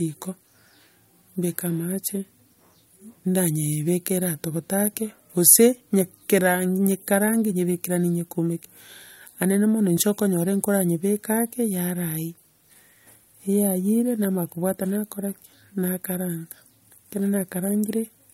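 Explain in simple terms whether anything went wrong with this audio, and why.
Nothing went wrong here.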